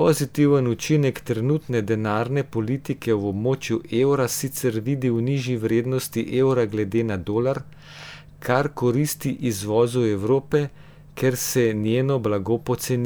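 No audible technical faults at any point in the speech recording; nothing to flag.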